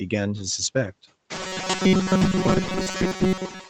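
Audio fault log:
Throughout, noise suppressor artifacts: the suppressor treats the steady background as noise and pulls those bands down frame by frame, by about 7 dB, so the noise drops away in pauses and swells back under the speech. Once the room noise rises by about 21 dB near 1.5 s, the room noise sits only about 9 dB below the speech.
1.35 to 3.70 s, robotic sound from repeated short buffers: new audio likely arrived at playback too seldom, so each gap was filled by looping the last few milliseconds while most of the real signal, roughly two-thirds or more, was skipped. The repetition imposes a fixed buzz at 188 Hz, which fits a buffer of about 5.3 ms. From there to the end, the voice becomes a rigid, metallic drone that follows the speech only loosely.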